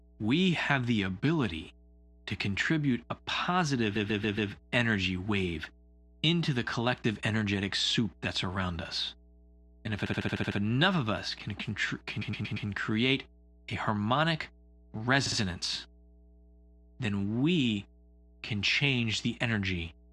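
Mains hum runs through this whole speech clip as a steady 60 Hz tone about 30 dB below the speech, the power line leaking into the signal through a ground loop or a nearby transformer. Repeated frames cause stutters where a short block of compressed audio is replayed: a 139 ms block four extra times from 3.95 to 4.51 s, before "energy wave into the"; a 65 ms block seven extra times from 10.05 to 10.58 s, before "enough of us can"; a 116 ms block four extra times from 12.21 to 12.67 s, before "create a harmonic"; and a 48 ms block twice more from 15.25 to 15.37 s. Each replay adds its length to the running time.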